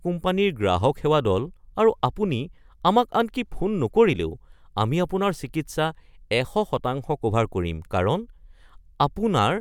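Listening closely to the speech recording, nothing stood out as a technical problem at any point.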